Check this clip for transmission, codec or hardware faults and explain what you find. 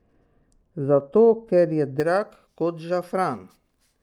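The first two seconds of the speech, from 0.0 to 2.0 s, carry a de-emphasis applied wrongly fault. A treble-cutting filter meant to reverse a pre-emphasis boost hit audio that never had that boost, or was applied a second time, so the highs are pulled down on a gentle slope, about 11 dB lower at 10 kHz than at 1 kHz. The speech sounds dull and muffled, with softened sibilants. On a spectrogram the upper bands fade steadily toward the top during that stretch, while the waveform looks smoother, with less fine detail.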